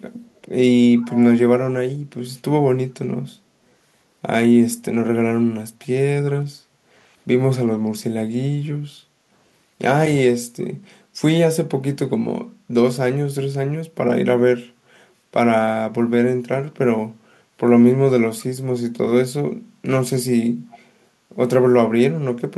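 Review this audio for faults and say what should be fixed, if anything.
Echo leak appears at 0.36–0.40 s, 0.98–1.26 s, 5.81–5.86 s and 20.71–20.79 s, as scraps of the speech returning 351 ms late, roughly 20 to 40 dB below the speech. This is likely a far-end loudspeaker echo that the echo canceller didn't fully remove. Unlike room reverberation, it is a distinct, fixed-delay copy, not a smooth decaying tail. Prevent it by having the far end use headphones or improving its echo cancellation.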